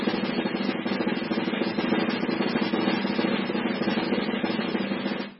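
A music clip with heavy MP3 compression damage running through the whole recording, likely from a very low bitrate in the region of 16 kbps. Nothing survives above about 5.5 kHz, so the treble is cut flat and the music sounds dull and watery, with swirling, metallic artefacts and smeared attacks. On a spectrogram this shows as a hard ceiling at 5.5 kHz and blotchy, flickering patches where weak frequency lines switch on and off between frames.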